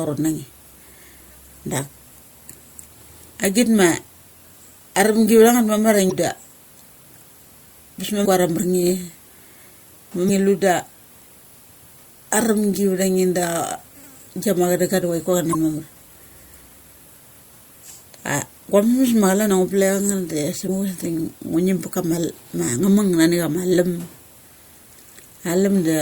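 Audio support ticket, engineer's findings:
Brief chirp/blip in the speech, each about 40 ms, at 6.08, 8.22 (just before "kuar a"), 10.26 (just before "lu da"), 15.51 and 20.65 s. Damaged data in the compressed stream: corrupted frames misdecoded, decoder loses sync and jumps to the next frame header.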